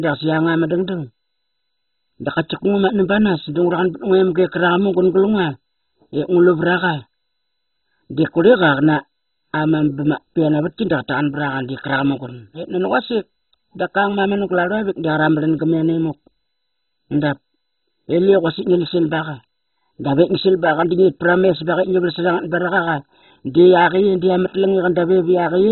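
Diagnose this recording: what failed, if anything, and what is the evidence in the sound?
The failure sits at the codec stage: the speech is dull throughout, with nothing above 4 kHz, and carries heavy gurgling, granular distortion where sub-bands switch on and off and the remaining ones are coarsely quantised. That pattern is likely MP2 compression at a very low bitrate, with the damage pointing to something around 16 kbps. A plain low-pass filter or band-limited line would leave the remaining band clean rather than flickering and gritty.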